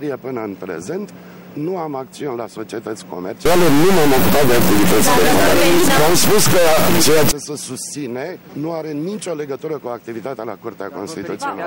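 From 3.46 s to 7.31 s the sound turns harsh and buzzy, and quiet moments fill with a loud noise floor at about -10 dBFS. This is likely a stuck bit: one high-order data bit held fixed, so roughly half the samples jump by its large weight.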